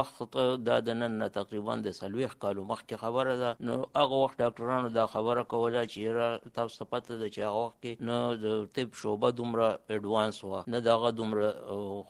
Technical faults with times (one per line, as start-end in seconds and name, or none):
3.52-8.83 call bitrate drop